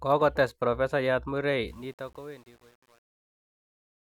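Truncation distortion on a fade runs from 1.68 s to the end at 4.19 s, where the speech fades out from around 1.7 seconds onward. The gain stage drops low-order bits without dither, and the grain points to an 8-bit word length. From 1.84 s on, the falling waveform collapses into coarse square steps, so the tail sounds gritty instead of thinning out cleanly.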